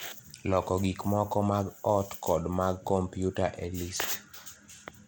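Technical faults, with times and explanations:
throughout, Bluetooth SBC compression: the speech has a plainly audible coarse, gritty texture, with nothing above about 21.6 kHz. The likely cause is SBC coding, consistent with about 96 kbps, whose simple sub-band bit allocation quantises the bands coarsely.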